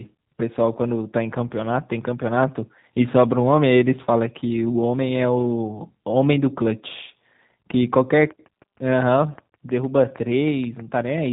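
From start to finish the speech sounds muffled, slightly rough and synthetic, with nothing above 3.8 kHz: G.729 codec damage from 8 kbit/s model-based coding that rebuilds the voice from a few pulses per frame.

From 8.31 s to 11.27 s a train of clicks ticks steadily over the sound, about 6.4 per second, some twenty in all, peaking roughly as loud as the speech, likely from electrical interference or a struggling interface.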